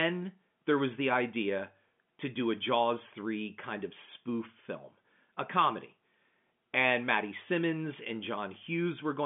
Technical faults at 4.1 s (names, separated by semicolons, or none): none